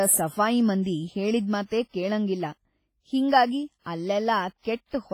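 From start to finish the speech carries a ringing, washy smear, with a hiss that swells and fades along with the voice, and the damage is heavy. That's likely WMA compression from an old WMA 1 style transform encoder: long blocks spread the quantisation noise over tens of milliseconds around each sound, and at what sounds like a low bitrate, around 24 kbps, weaker spectral detail drops out entirely. Content still reaches up to about 21.4 kHz.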